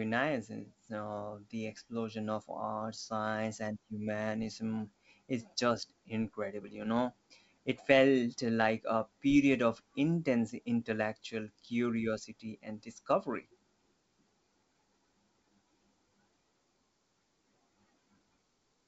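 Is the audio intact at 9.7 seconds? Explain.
Yes, at 9.7 s the speech is intact, with no dropout, click or distortion, only the faint upper-band hiss of G.722 wideband telephone coding at 64 kbit/s.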